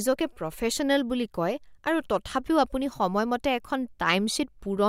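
No technical faults can be heard anywhere in the recording.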